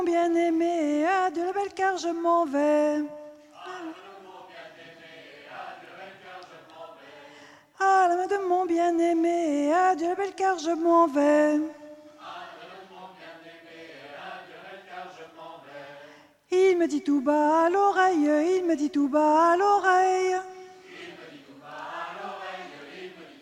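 No technical faults can be heard in this audio.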